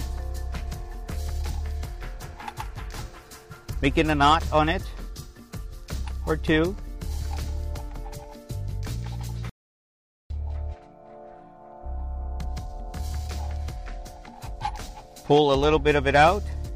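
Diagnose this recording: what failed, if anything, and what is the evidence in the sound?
The input feed was likely lost at the capture stage, through a disconnected device or failed link, while the recorder kept writing silence. This audio dropout to silence runs from 9.50 to 10.30 s: the sound cuts off abruptly, 0.81 s of silence with no room tone, then resumes mid-flow.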